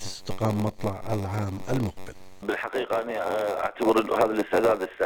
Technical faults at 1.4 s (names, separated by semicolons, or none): block size mismatch (padded)